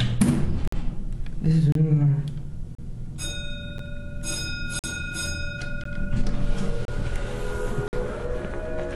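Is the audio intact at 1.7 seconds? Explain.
No, there's a gap between stream segments from 1.72 to 1.75 s: the segment timestamps leave about 30 ms uncovered, so the player drops in a hard-edged hole of silence, though no audio is lost.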